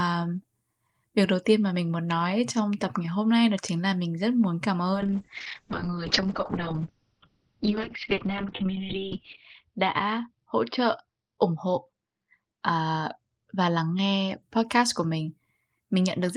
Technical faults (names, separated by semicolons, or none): call bitrate drop